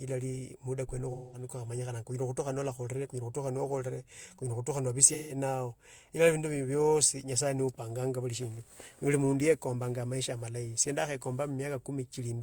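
AAC frame loss with concealment at 1.12–1.46 s and 5.07–5.37 s: the decoder rebuilt missing frames from the last good spectrum, leaving smeared, noisy patches in the speech.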